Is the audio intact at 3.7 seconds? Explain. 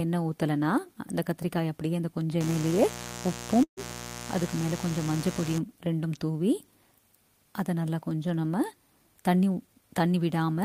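No. At 3.7 seconds two faults overlap. A mains buzz runs from 2.40 to 5.59 s. Switching spikes locked to the 60 Hz supply, two per cycle, add harmonics of 60 Hz that climb into the kilohertz range. The result is a steady, raspy buzz sitting roughly 10 dB under the sound. On a spectrogram it appears as a ladder of evenly spaced horizontal lines across that span. The waveform shows a repeating spiky pattern riding under the audio.

Inside that stretch, from 3.63 to 3.80 s, there is a call audio freeze. The last sound is stretched into a fading buzz or hiss, then about 90 ms of silence, and then the audio resumes exactly where it stopped. Roughly 136 ms has been inserted and nothing is lost, so everything afterwards runs that much later. This is likely a jitter buffer running dry while packets were delayed in transit. On a spectrogram it looks like smeared, decaying energy followed by a blank gap. 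The waveform shows a tapering tail, then a flat line.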